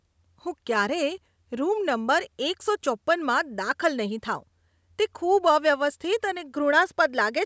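No technical faults can be heard in the speech. It has passed through a call's microphone processing, which trims away the lowest bass and leaves nothing above 8 kHz, and that is normal for such a path.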